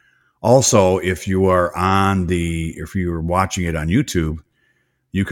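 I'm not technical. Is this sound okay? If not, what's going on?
Yes, this sound is okay, and nothing is going on that needs fixing.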